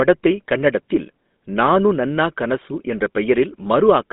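From start to finish the speech has been through a GSM full-rate codec, and the damage is plainly audible. That coder keeps only a crude model of the vocal tract, excited by a sparse pulse train, so voicing comes out buzzy and gravelly, with a rate that fits 13 kbps. The band is phone-narrow, roughly 200 Hz to 3.6 kHz, with nothing at all above 3.8 kHz, so sibilants sound dull and clipped.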